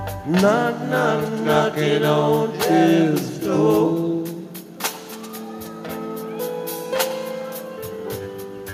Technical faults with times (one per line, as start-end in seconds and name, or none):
none